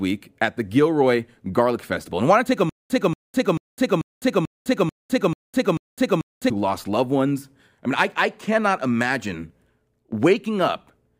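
Stutter with silent gaps, 2.69 to 6.50 s, after "want to take a": a 233 ms fragment repeats eight times, each followed by 207 ms of silence, in a steady 440 ms cycle. The stream likely stalled, replaying its last fragment at each retry. The speech due in that span is lost, and playback resumes at "lost loved ones I".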